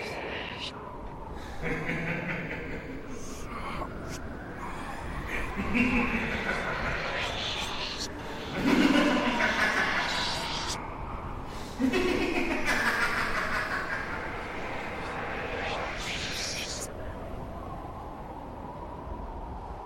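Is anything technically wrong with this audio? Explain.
No, no technical faults detected.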